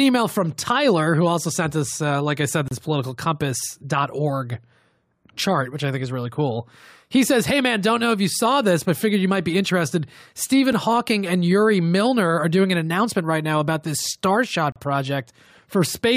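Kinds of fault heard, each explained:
gap between stream segments: Two neighbouring segments do not meet in time, so the player inserts silence between them. Nothing is lost; time is added. The speech stops abruptly and resumes with hard edges. The first hole follows "uh like I said" at 2.68 to 2.71 s, about 30 ms. A brief 5 ms dropout falls at 10.72 s. The longest, about 35 ms, runs from 14.72 to 14.76 s. The spacing points to 4-second segments.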